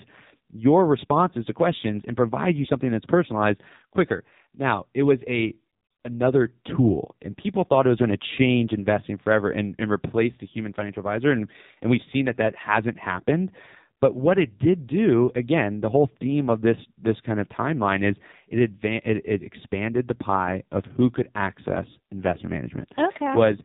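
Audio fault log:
Throughout: AMR narrowband mobile codec, speech squeezed through a low-rate mode, likely near 6 kbps, sounds buzzy and synthetic; spectrogram shows a hard ceiling at 3.8 kHz.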